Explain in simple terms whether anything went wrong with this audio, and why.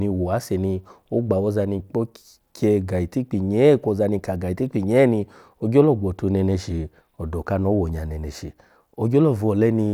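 Nothing went wrong here.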